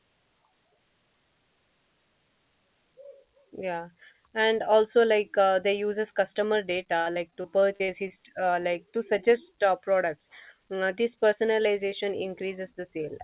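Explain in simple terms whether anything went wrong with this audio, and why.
Between 6.98 and 8.12 s, bits of the call's audio got lost in transit about ten times, each gap under a twentieth of a second. The system filled each hole by stretching the last sound, so the speech turns choppy and robotic. This is repeated packet loss.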